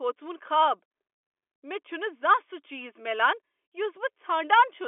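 Speech, with no technical fault heard anywhere in the clip. It has come over a G.711 telephone line, so the sound is confined to roughly the 300 Hz to 3.4 kHz telephone band, with nothing above about 3.7 kHz.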